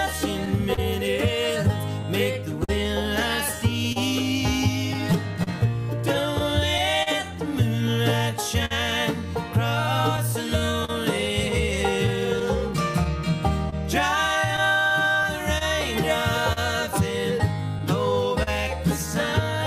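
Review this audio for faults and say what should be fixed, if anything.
The sender's audio clock runs about 3 percent slower than the receiver's throughout, so this is clock drift between sender and receiver. The jitter buffer keeps draining, and the receiver must repeat or stretch short pieces, leaving small timing hiccups at uneven intervals across the whole clip. Locking both ends to a shared clock, or resampling adaptively at the receiver, would prevent it.

Scattered short gaps run from 0.45 s to 18.49 s: roughly thirty lost or late packets, the longest around 50 ms, together about 700 ms of patched audio. Each hole was filled by extending the preceding sound, giving brief ticks and smears. Better network buffering or forward error correction would prevent them.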